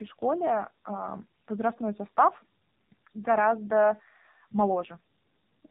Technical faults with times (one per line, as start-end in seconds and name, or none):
0.00-5.70 tandem speech coding